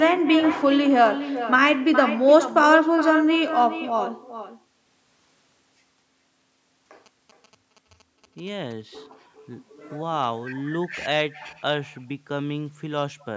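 Echo with no canceller runs through the whole clip. The far end's loudspeaker is feeding its microphone, and nothing strips that sound out, so every phrase returns roughly 0.4 s later as a thinner copy about 11 dB below the original speech.

GSM signalling bursts appear from 7.06 to 8.73 s. A nearby 2G phone is signalling in short radio bursts, and the audio circuitry rectifies them into a galloping dit-dit-dit of short 217 Hz buzzes, faint and well beneath the speech.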